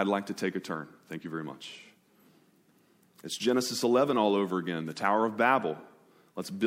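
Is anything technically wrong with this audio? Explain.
No, nothing stood out as technically wrong when listening to this speech recording.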